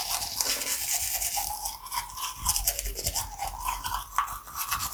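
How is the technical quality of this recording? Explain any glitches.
Nothing stood out as a glitch or technical problem on listening to this recording of everyday sounds.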